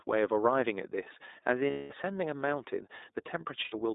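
iLBC codec damage runs through the whole speech clip. The line is narrowband, roughly 250 Hz to 3.7 kHz, and each 20 ms frame is coded independently. The result is a plainly audible rough, synthetic texture, consistent with iLBC at around 15.2 kbps.

Lost iLBC frames occur at 1.70 to 1.92 s (200 ms) and at 3.64 to 3.75 s (80 ms). The decoder fills each gap by repeating the last pitch cycle mixed with noise, so it sounds like a held, buzzy vowel. The voice is right again almost immediately afterwards.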